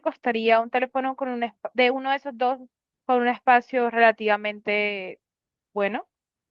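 Nothing in this recording stands out as a technical fault, so there's nothing to walk through here.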